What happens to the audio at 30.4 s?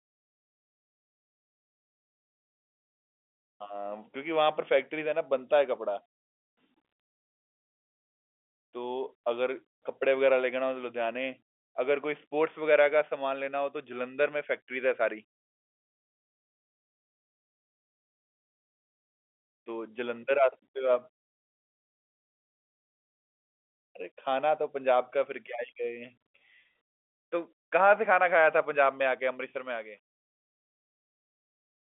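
At 30.4 s the fade-out shows truncation distortion (29.45–31.93 s): without dither, the shrinking level collapses onto a few coarse steps, consistent with about 9 bits. This gives a gritty sound rather than a clean telephone-band decay.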